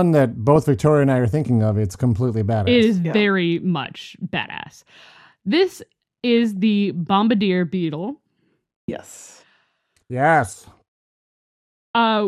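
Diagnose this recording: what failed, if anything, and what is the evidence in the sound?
Weak DAB reception let bit errors slip past error correction into the MP2 audio, causing DAB burbling at 3.84–4.12 s after "is yeah very", 6.29–6.58 s before "the bombardier", and 8.11–8.23 s after "the bombardier". Wrong samples give short blips of noise in single sub-bands over the speech, and wrong scale factors make sub-bands jump in level for up to a frame.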